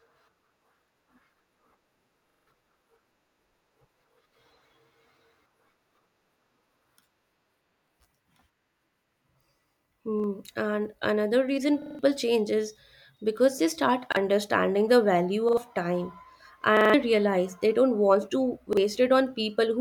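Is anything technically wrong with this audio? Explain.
Yes. Seven stutters break up the speech, each a hard-edged chunk of about 43 ms replayed: four extra times at 2.30–2.48 s, 11.82–11.99 s (after "another reason") and 16.77–16.94 s; twice at 15.49–15.57 s (after "the value"); once at 10.20–10.24 s, 14.12–14.17 s and 18.73–18.77 s (after "they don't want to"). These are repeated buffers. Fresh audio arrived late, so playback looped the last block, which fits a 2048-sample buffer, and swallowed roughly 40 to 150 ms of speech each time.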